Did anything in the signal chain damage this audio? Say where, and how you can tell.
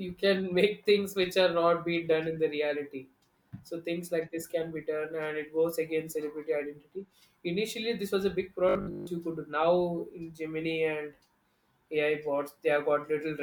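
Yes. From 8.69 to 9.07 s the speech turns into a rigid, metallic buzz. It still follows the words roughly, but a fixed 50 Hz buzz is imposed on it. This is robotic sound from repeated short buffers, at the driver or buffer stage. New audio likely arrived too seldom, so the playback repeated the last 20 ms again and again. That period gives the 50 Hz drone. Most of the sound in that stretch is repeats, and the real audio is skipped.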